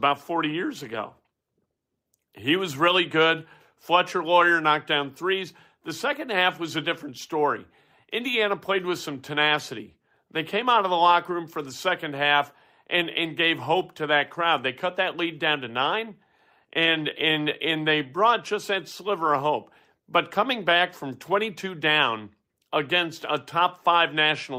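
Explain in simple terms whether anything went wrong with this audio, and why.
One fault, at 11.69 s, between "locker room for the" and "second half and and". A lost packet rebuilt from error correction left a brief rough, grainy patch of about 20 milliseconds, which points to a single lost packet. The next packet carried a cheaper backup copy of the missing stretch, and the decoder played that copy instead. That prevents a gap, but the backup holds less detail, so that moment sounds noisier.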